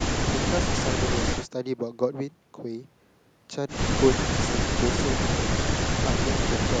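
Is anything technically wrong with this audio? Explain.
No, the speech signal holds steady throughout, with no technical faults to be heard.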